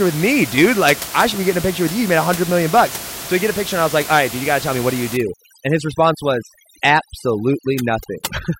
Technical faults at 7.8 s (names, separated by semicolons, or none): overdone noise removal